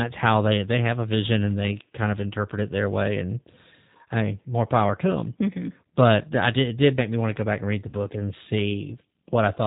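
From the start, the speech carries plainly audible G.729 codec damage. The codec works at 8 kbit/s. It models the voice with a vocal tract filter and a pitch predictor, plus a handful of pulses per 10 ms frame. Everything above 4 kHz is gone, so the sound is dull and boxy. Voiced sounds come out slightly rough and synthetic. Breathy and noisy parts warble.

At 7.89 s, just after "back and read the", VoIP packet loss concealed by the speech codec breaks in. About 40 ms of audio never arrived, which fits two 20 ms packets. The decoder filled the gap by repeating its last pitch and filter with falling gain. The voice smears into a short buzzy tone or coloured noise that fades. It returns at 7.95 s, still weak or distorted for a moment as the decoder recovers.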